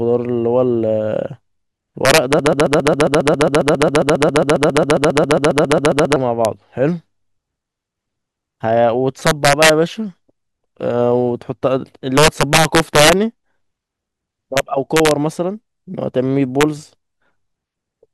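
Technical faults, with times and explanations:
Throughout: integer overflow. Gain pushes loud peaks about 6 dB past full scale, and instead of clipping, those samples wrap to the opposite sign. The affected peaks, a small fraction of the audio, jump across the whole range, giving sharp, violent cracks on the loudest speech.
2.39 to 6.16 s: broken-record loop. A 136 ms fragment repeats exactly, back to back, 28 times, producing a rapid stutter. The likely cause is a stalled player or stream resending its last buffered piece, so the speech that belonged in that span is missing.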